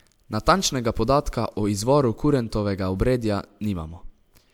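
A speech recording, and nothing is technically wrong with it.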